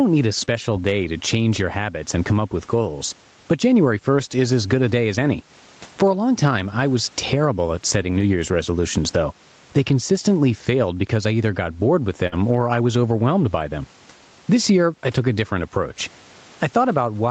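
Throughout, the background swells in pauses and ducks under each louder syllable by around about 15 dB, squashing dynamics: gain pumping, likely from gain set too high feeding a fast limiter. At 0.41–0.43 s, between "need a" and "day to change your", a lost packet rebuilt from error correction sounds briefly rougher and noisier, yet nothing drops out, unlike concealment. Right after, at 0.45–0.49 s, a short concealed packet loss smears the sound as the receiver extends the last pitch or noise to cover about 17 ms. At 7.93–8.23 s, after "I was terrible at", a longer run of error-correction rebuilding, 160 ms in all, leaves a grainy, coarse stretch with no gap. At 12.27–12.34 s, after "either got bored with" and before "or I was overwhelmed", a burst of packet loss produces a fading continuation of the last sound and skips about 40 ms of audio, which distinguishes it from smooth concealment. 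A further 40 ms of error-correction roughness follows at 12.32–12.38 s.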